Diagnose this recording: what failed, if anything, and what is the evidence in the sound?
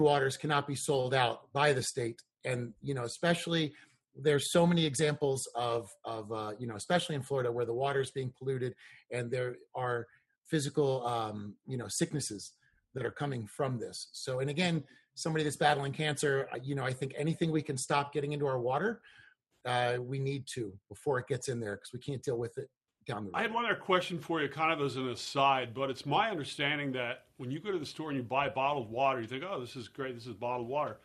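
Nothing failed at any stage of the chain; there's no evidence in the sound of a wiring, converter, buffer, format-conversion, processing, network, storage or playback fault.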